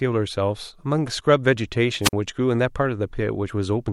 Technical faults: wireless microphone squelch dropout

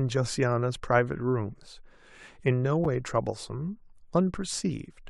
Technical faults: gap between stream segments

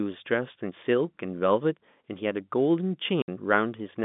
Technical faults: packet loss filled with silence

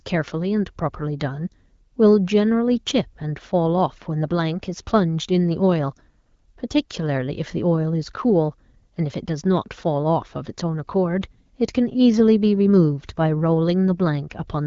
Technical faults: none

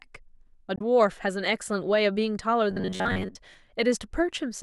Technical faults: damaged data in a compressed stream; robotic sound from repeated short buffers

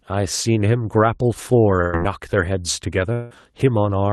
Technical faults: burst of packet loss; long network dropout

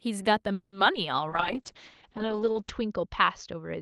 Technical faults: call audio freeze; short concealed packet loss; call bitrate drop

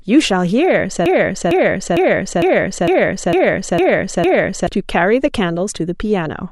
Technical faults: broken-record loop

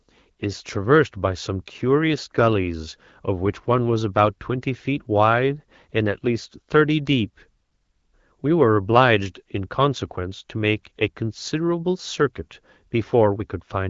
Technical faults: none

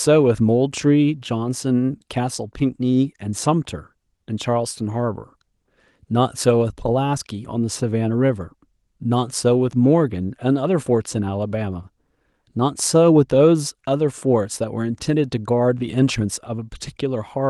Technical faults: none

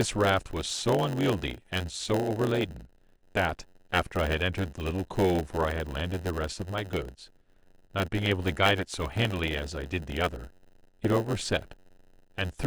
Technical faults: block size mismatch (padded)

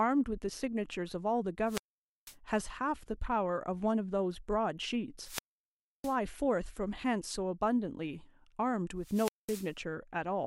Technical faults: wireless microphone squelch dropout

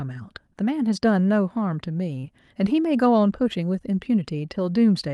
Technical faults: short concealed packet loss

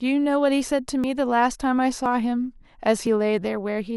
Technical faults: periodic USB or driver dropouts

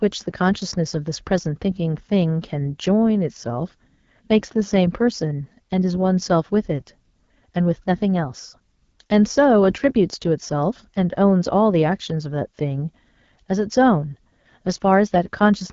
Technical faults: AMR wideband (HD Voice) codec

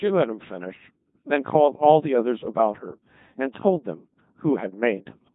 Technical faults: Codec 2 vocoder

